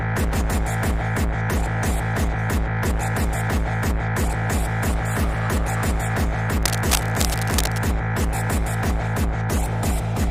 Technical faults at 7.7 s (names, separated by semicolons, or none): cable scratch noise